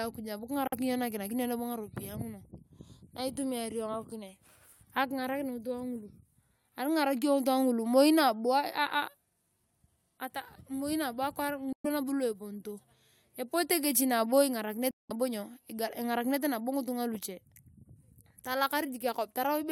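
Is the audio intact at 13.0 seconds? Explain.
Yes, at 13.0 seconds the speech is intact, with no audible fault at that moment.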